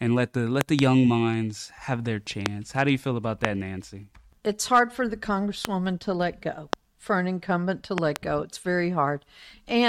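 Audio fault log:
0.61–0.81 s and 7.98–8.18 s: loud pop, in pairs. A voltage step, likely from a plug, switch, static discharge or driver glitch, entered the signal path twice in quick succession. Each pair is heard as a double thump about 20 dB above the speech, which carries on underneath.
2.46–2.48 s, 3.45–3.47 s, 5.65–5.67 s, 6.73–6.75 s: loud pop, single. Each is one brief 20 ms pulse peaking about 25 dB over the speech (about 20 dB at 6.73 s), heard as a sharp crack.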